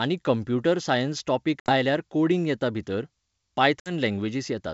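Packet loss on an ADPCM call, at 1.60 to 1.71 s and again at 3.80 to 3.92 s, drops about 60 ms of audio, roughly a few packets, each time. The decoder's predictor and step size lose track of the sender's, so each hard-edged silent hole is followed by speech returning slightly distorted, before it settles. The G.722 wideband coding itself sounds clean, which fits its full 64 kbit/s mode.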